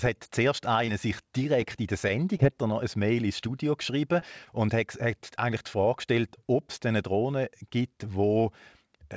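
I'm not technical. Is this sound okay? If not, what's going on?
No. There are small dropouts, typical of an internet call.

Short concealed packet loss: a tiny piece, about 20 ms, never arrived in time. The receiver covered each hole by stretching the sound just before it, so you hear a quick smear or wobble. This happens at 0.86 s, right after "hat zuerst", at 3.40 s, just before "geschrieben und", and again at 4.20 s and 4.45 s.

Scattered short gaps: between 1.61 s and 2.74 s, roughly seven tiny bits went missing, one here and one there. Each was patched the same way. None lasts much over a hundredth of a second. The result is a few hiccups in that stretch.

The call link itself also dulls the sound a little, with nothing above 8 kHz.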